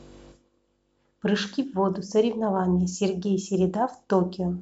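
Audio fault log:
Nothing to log here; this bit of speech runs along without a single fault worth a line.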